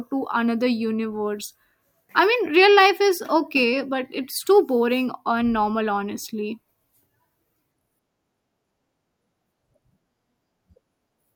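No technical faults can be heard anywhere in this speech recording.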